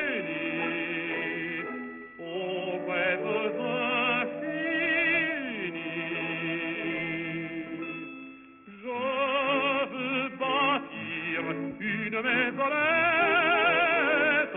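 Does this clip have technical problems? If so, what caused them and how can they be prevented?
Yes. Aliasing runs through the whole clip. High-frequency detail folds back around 3 kHz, which points to the audio being dropped from 44.1 kHz to about 6 kHz with no anti-aliasing filter first. The folded energy lands at wrong, unrelated frequencies and sits not far below the wanted sound, giving a gritty, metallic edge, with the spectrum crowding hard up to the 3 kHz edge. Plain band-limiting would only sound dull and muffled. Here, false tones are added. To prevent it, low-pass filter below half the new rate before resampling, or use a proper resampler that does this for you.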